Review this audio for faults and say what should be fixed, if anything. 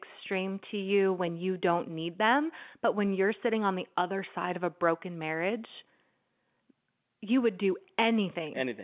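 Nothing in this speech clip needs fixing. It carries the narrow band of G.711 telephone coding in its mu-law form, with nothing above 4 kHz and a faint hiss that rises and falls with the level of the speech.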